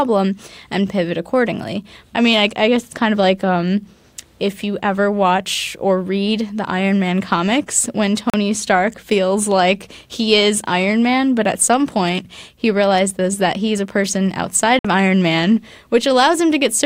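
At 8.30 to 8.34 s, right after "comics when", the speech cuts to silence for about 37 ms, and at 14.79 to 14.85 s, after "he's a person outside", a second gap lasts about 56 ms. These are Bluetooth dropouts, likely from packets missing their deadline on the wireless link, which fits two and three lost packets. Unlike a buffer underrun, playback resumes further along rather than picking up where it stopped, so the missing audio is skipped.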